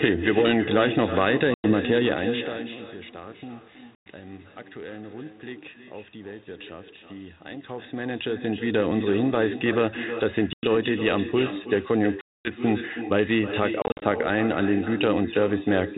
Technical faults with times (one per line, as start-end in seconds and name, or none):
0.00-15.97 echo with no canceller
1.54-1.72 packet loss on an ADPCM call
3.95-4.06 packet loss on an ADPCM call
10.53-10.66 packet loss on an ADPCM call
12.21-12.52 packet loss on an ADPCM call
13.82-14.03 packet loss on an ADPCM call